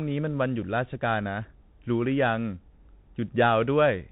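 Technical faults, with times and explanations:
Throughout, Bluetooth CVSD headset codec: the speech is confined to a narrow telephone-like band with nothing above about 4 kHz, and a grainy hiss runs under it. The codec sends one bit per sample saying only whether the waveform goes up or down, with an adaptive step size. Where loud high-frequency energy rises faster than the step can follow, it distorts, so s sounds turn scratchy. The damage is plainly audible and fits a 64 kbit/s CVSD stream.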